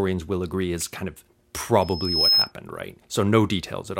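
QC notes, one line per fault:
1.81–2.52 s: loudspeaker feedback squeal. A single tone at 5.2 kHz rises out of the audio over roughly half a second. It then holds at about 10 dB above the programme level until it cuts off at 2.52 s. The microphone is hearing its own loudspeaker, and at 5.2 kHz the round-trip gain exceeds unity. Each pass through the loop reinforces that frequency, so it swells on its own into a sustained, piercing whistle rather than arriving at full level.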